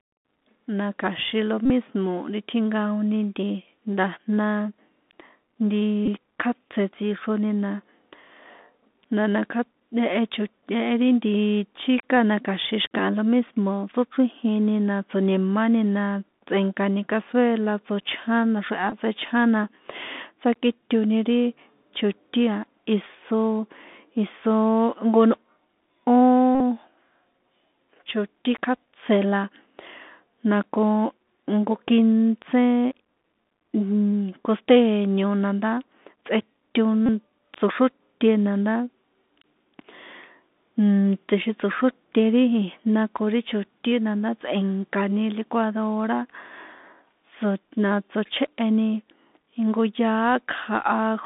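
The speech is carried through a Bluetooth CVSD headset codec from start to finish. The link sends one bit per sample to say whether the waveform steps up or down, with an adapting step size. The sound points to a 64 kbps stream, and the line passes only about 200 Hz to 3.6 kHz. The damage is plainly audible: a muffled telephone band, scratchy sibilants, distortion on loud high sounds, and a granular hiss under the speech.

Five times a Bluetooth headset packet was repeated. Voice packets dropped on the radio link, and the headset chip decoded the previous packet's bits again in their place, repeating every 3.75 ms. That gives a brief buzz near 267 Hz until clean packets resume. It happens at 1.65 to 1.70 s, then at 6.06 to 6.08 s just before "kjátse tsixroni na". It comes again at 18.90 to 18.95 s between "tsꞌe̱nkani cazuela tsochján naxreha" and "tsechján na", at 26.55 to 26.60 s, and at 37.06 to 37.09 s just before "tsoxróte na ndá".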